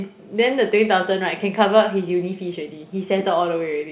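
Speech with no technical faults, carried over a call path whose audio band stops at 4 kHz, which points to a narrowband telephone codec such as G.711 mu-law at 64 kbps.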